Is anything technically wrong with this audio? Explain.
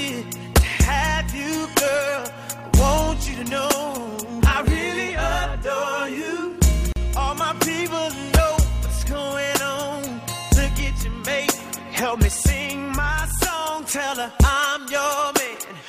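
Yes. At 6.92 s there is a gap at a join of encoded pieces, lasting about 39 ms. Separately encoded sections were joined untrimmed, so encoder start delay and end-frame padding remain. The sound drops out briefly, then resumes where it stopped.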